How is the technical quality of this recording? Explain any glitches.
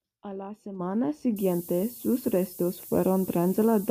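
The recording has one clear fault in its last two thirds. From 1.36 s, right after "la semana", to the end, the speech shows low bit depth with noise shaping. Only about 6 bits carry the signal. The rounding error is pushed upward in frequency. The result is a steady, thin hiss that climbs toward the top of the band, only about 10 dB below the speech.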